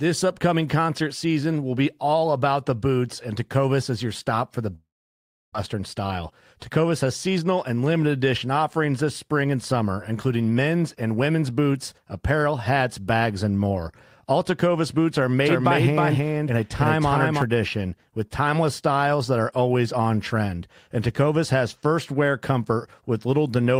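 From 4.75 to 5.56 s, the speech smears into a fading buzz, then about 0.68 s of silence, returning with roughly 0.6 s missing, likely a long network dropout.

From 5.74 to 7.78 s, the speech sounds hurried, running 8% faster at unchanged pitch. This is a jitter buffer speed-up, trimming pitch-period slices to shed about 150 ms of delay.

From 15.46 to 17.42 s, a dry, equally loud second copy trails about 0.3 s behind and starts and stops abruptly, likely a doubled audio track.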